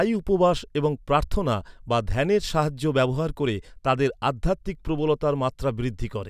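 No technical faults can be heard anywhere in this speech recording.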